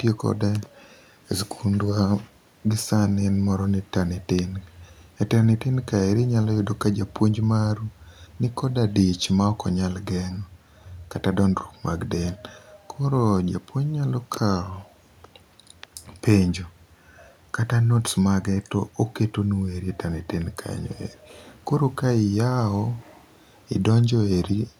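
Nothing in the speech stood out as a technical fault on listening.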